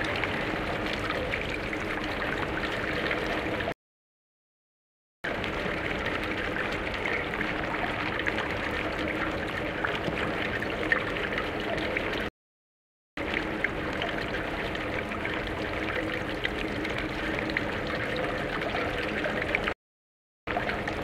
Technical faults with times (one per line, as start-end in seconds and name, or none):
3.72-5.24 playback stall
5.24-8.24 time-compressed catch-up
12.29-13.17 playback stall
13.17-16.17 time-compressed catch-up
19.73-20.47 playback stall
20.47-21.03 time-compressed catch-up